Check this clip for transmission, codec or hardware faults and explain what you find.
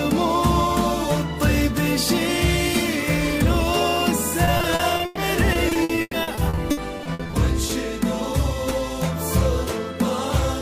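There is one transmission fault: repeated packet loss with a robotic sound, from 4.45 to 7.71 s. About two dozen short holes appear, the longest 120 ms. Each is patched by stretching the preceding sound. This conceals about a quarter of the span and leaves choppy audio with pieces missing.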